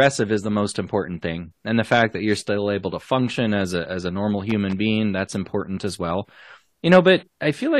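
From 4.49 to 4.77 s, between "a as a normal" and "being that's important as", loose connector crackle chops the speech as a failing contact makes and breaks, giving irregular scratchy bursts. The waveform shows ragged gaps and spikes, and the spectrogram shows broadband vertical streaks.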